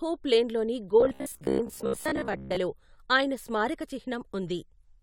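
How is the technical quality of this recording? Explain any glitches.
The recording has one clear glitch. From 1.01 to 2.57 s there is robotic sound from repeated short buffers: the speech turns into a rigid, metallic buzz at 66.7 Hz that only loosely tracks the words. The likely cause is a starved stream replaying its last 15 ms chunk, with about half the audio replaced by repeats. A spectrogram would show evenly spaced harmonic stripes, and the waveform would show identical repeating blocks.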